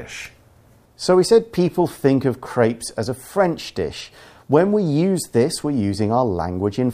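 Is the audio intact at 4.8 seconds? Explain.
Yes, the speech at 4.8 seconds plays through intact, with no dropout, click, distortion or other technical fault audible at that moment.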